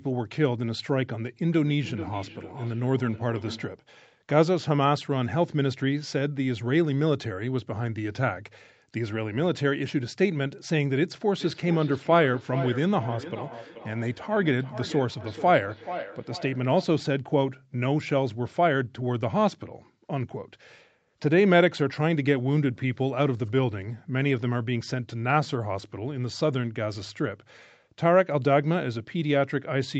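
From 1.52 to 3.80 s and again from 11.41 to 16.96 s, a feedback echo between two devices returns the speech roughly every 0.4 s. The repeats grow thinner and more ringing, peaking about 16 dB and then about 12 dB below the speech.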